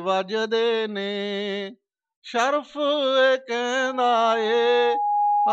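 From 3.78 s to the end, a loudspeaker feedback squeal swells at 825 Hz over about a second and a half, ending about 5 dB above the sound. Unlike a steady interfering tone, it grows by itself.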